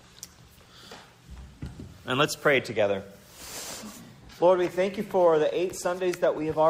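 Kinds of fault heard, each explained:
No faults detected; nothing in the audio points to a problem in capture, processing or playback.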